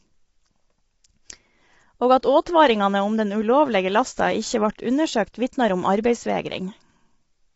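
Throughout, the speech sounds rough and grainy, with noise between the pitch harmonics and nothing above 7.7 kHz. This is likely low-delay AAC compression (AAC-ELD) at a low bitrate, around 24 kbps. Its short frames blur the harmonics, which a plain low-pass filter would leave clean.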